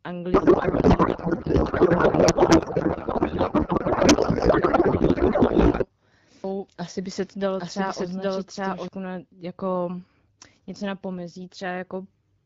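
From 0.33 to 5.86 s the speech turns into garbled noise and warble that barely tracks it. This is a codec payload misread: octet-aligned AMR frames unpacked as bandwidth-efficient, scrambling every field.

From 6.44 to 8.88 s a doubled audio track appears. A dry, full-band second copy trails about 0.7 s behind at roughly equal level and cuts in and out abruptly, likely from a second, slower capture path.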